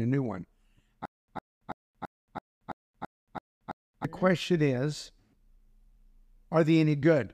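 From 1.05 s to 4.05 s the speech breaks into a stutter with silent gaps: a fragment about 105 ms long plays, drops into about 228 ms of dead digital silence, then returns, repeating nine times at an even 332 ms rhythm before normal playback resumes just ahead of "question is". This is likely a stalled stream or player replaying its last buffered fragment at each retry, so the speech that belonged in those three seconds is lost.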